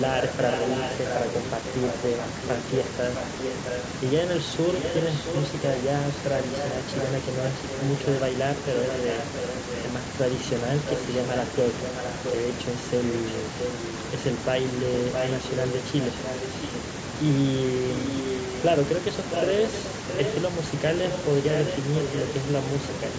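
Speech with an echo leak: a delayed copy of the talker trails the direct sound by about 0.66 s, only a few decibels below it, during 0.18–3.83 s, 4.79–9.79 s, 10.88–12.36 s, 15.13–16.68 s and 17.98–22.89 s. The constant delay points to one acoustic return path, likely a far-end loudspeaker whose output reached its microphone and was not fully removed by that side's echo canceller before being sent back.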